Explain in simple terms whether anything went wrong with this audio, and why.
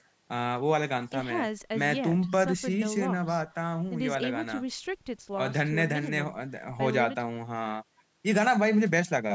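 Nothing went wrong here.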